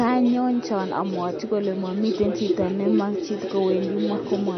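From start to finish the speech carries plainly audible codec damage, with the likely cause being MP3 compression at a low bitrate. Nothing is present above 6.1 kHz, where the encoder has cut the treble to save bits, so the top end sounds dull and s sounds lose their edge. Weak frequency lines drop in and out between frames, giving a watery, swirly texture, and consonant onsets sound smeared. The damage is consistent with a bitrate of around 31 kbps.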